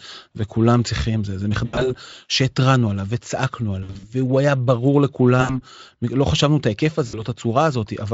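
VoIP packet loss concealed by the speech codec occurs at 1.65–1.95 s, 3.83–4.12 s, 5.41–5.61 s and 7.07–7.22 s. The Speex decoder fills each gap by extrapolating its last pitch and filter at falling gain, smearing speech into a fading buzz or coloured noise that stays weak briefly afterward.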